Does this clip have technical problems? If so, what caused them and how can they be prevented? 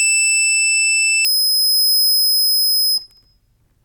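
Yes. From 1.25 s to 3.84 s there is a section at the wrong speed, likely from a mismatched clock in editing or playback. The music runs at 1.92 times its recorded rate, turning hurried and about ten semitones higher. Matching sample-rate and clock settings across the whole chain prevents this.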